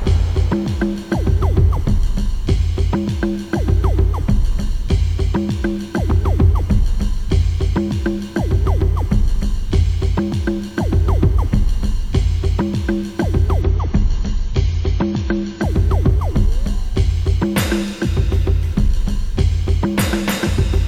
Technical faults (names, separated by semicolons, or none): adaptive stream at a lower bitrate